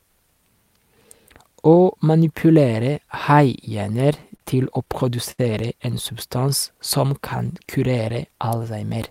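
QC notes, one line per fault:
4.36–4.41 s and 5.31–5.40 s, short stall from a late packet: just before "til å" the speech freezes on its last sound for about 40 ms, and right after "til å" it freezes again for about 71 ms, with a faint buzzy hold. A packet arrived late, the jitter buffer ran dry, and the receiver stretched the last sound before resuming at the same point. Unlike a dropout, nothing is skipped. The speech simply pauses unnaturally and then continues slightly later.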